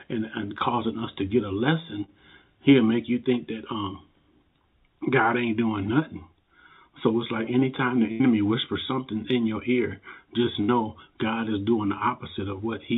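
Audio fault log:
2.04–2.10 s, short concealed packet loss: about 40 ms of audio never reached the decoder in time, so the receiver spent 37 ms extending the last sound, pitched if voiced or as shaped noise otherwise, before blending back, leaving a brief smear or wobble.
8.12–8.22 s and 10.62–10.70 s, burst of packet loss: runs of about 80 ms and 60 ms were lost, so the receiver stretched the preceding sound while fading it into a held buzz or dying hiss, then resumes further along with that stretch gone.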